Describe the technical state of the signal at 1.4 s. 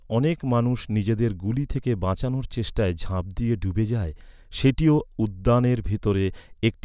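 At 1.4 s the speech signal is intact, with no dropout, distortion, glitch or other fault to be heard at that moment.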